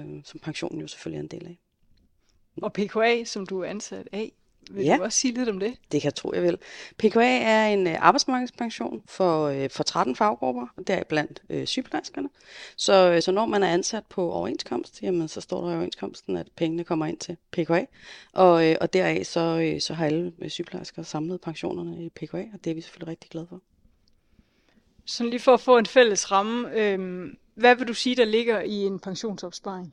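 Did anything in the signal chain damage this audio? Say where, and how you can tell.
Yes. From 28.67 s to the end at 29.93 s the sound turns hollow and phasey, with a fixed notch around 3 kHz. That is channel delay (comb filtering): one channel lags roughly 0.2 ms at the converter or driver stage, and summing to mono cancels evenly spaced frequencies.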